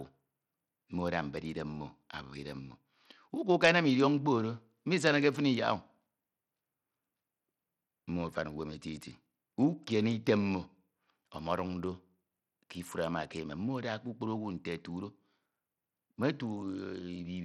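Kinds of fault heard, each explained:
Bluetooth SBC compression: throughout the speech the treble thins and flickers, and a gritty noise with aliasing rides on the sound, as starved upper sub-bands lose bits and the rest are coarsely quantised. The cause is likely SBC, and the damage fits a bitrate near 80 kbps.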